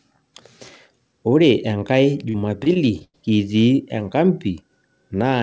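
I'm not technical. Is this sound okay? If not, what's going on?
No. Between about 2.30 and 3.16 seconds the speech turns choppy and robotic, with small bits dropping out. This is repeated packet loss: the call lost or delayed five chunks of audio in quick succession, the longest about 95 ms. Each time, the call software papered over the hole by stretching the last bit of sound, covering roughly a fifth of that stretch with filler, which gives the choppy, stuttering quality.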